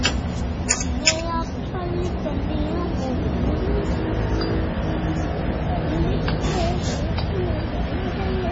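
Heavy MP3 compression, likely at a very low bitrate around 24 kbps, runs through the whole of this recording of sounds. Short of bits, the encoder has cut everything above about 9.2 kHz and dropped weak frequency lines that flicker in and out between frames. The result is a dull top end with a watery, swirling texture across the clip, and sharp onsets come out smeared rather than crisp.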